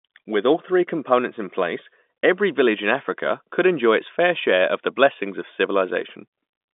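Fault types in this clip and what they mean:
Nothing's amiss here; the speech just comes across like an ordinary landline call, with the top end stopping a little under 4 kHz.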